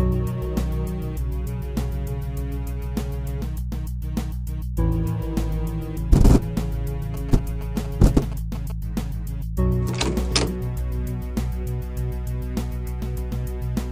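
GSM signalling bursts interrupt the audio from 7.14 to 8.72 s. A nearby 2G phone is signalling rather than carrying a call, so it sends its radio bursts in short groups. The audio circuit rectifies that energy into sound. The result is a galloping dit-dit-dit of short buzzes. The buzz repeats at 217 Hz, the burst rate of the phone's transmitter. It sits roughly 15 dB below the wanted signal.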